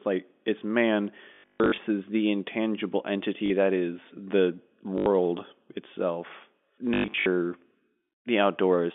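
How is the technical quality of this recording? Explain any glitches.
The recording has audible dropouts caused by packet loss with last packet repeated. This telephone speech is carried over G.711 coding, which limits the band to about 200 Hz to 3.5 kHz.

Packet loss with last packet repeated occurs at 1.34–1.78 s (after "like it's man", before "the intangible"), at 3.46–3.50 s (after "the intangible"), at 4.98–5.06 s (after "that is the"), and at 6.94–7.26 s. Lost chunks, which fit 20 ms packets, were filled by replaying the previous one. Longer runs buzz at 50 Hz, producing a robotic stutter. On a spectrogram this shows as repeated identical slices. On a waveform it appears as copied segments with abrupt steps.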